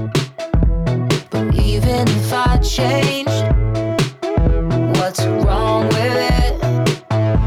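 No technical faults can be heard anywhere in the audio.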